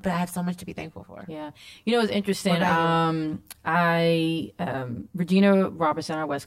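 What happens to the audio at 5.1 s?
At 5.1 s the speech is hollow from channel delay, or comb filtering, present throughout. One channel lags about 10 ms. Summed to mono, notches fall near 50 Hz and every 100 Hz above.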